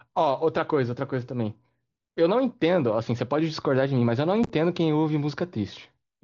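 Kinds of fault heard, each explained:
Unconcealed Bluetooth headset packet loss: around 4.44 to 4.50 s, lost headset voice packets were replaced by silence or an idle pattern, leaving abrupt gaps totalling 30 ms, none over 15 ms. The waveform shows short breaks with sharp edges, and the spectrogram shows thin vertical slices up to 8 kHz.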